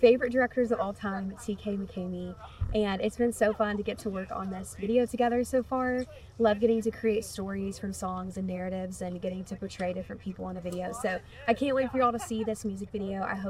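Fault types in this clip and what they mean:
No fault types are present in the clip, so there is nothing to list or explain.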